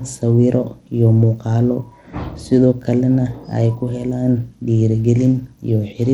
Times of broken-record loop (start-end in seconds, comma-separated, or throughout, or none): none